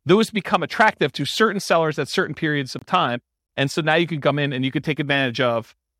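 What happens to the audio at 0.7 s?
Nothing goes wrong at 0.7 s; the speech plays through that moment intact, with no dropout, click or distortion.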